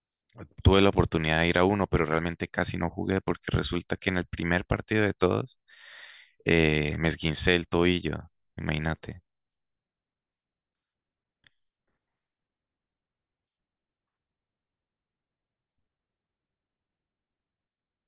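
Nothing in the speech stood out as a technical fault on listening.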